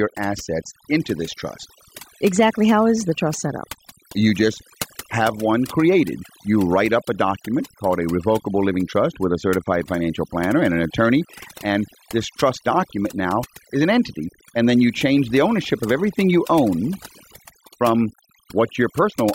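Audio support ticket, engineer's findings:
Overdone noise removal, throughout. Background drops and breaks up into twinkling specks. Noise reduction set too aggressive: bands near the noise estimate pushed far down or gated out, taking quieter speech components with them.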